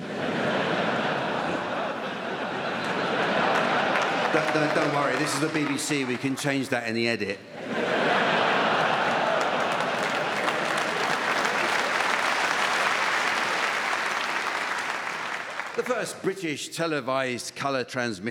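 From 2.83 to 4.06 s there's a spell of channel delay (comb filtering). One channel lags by roughly a single sample, so summing to mono puts the first notch up around 20 kHz. That gently rolls off the top end, so the sound turns slightly dull there.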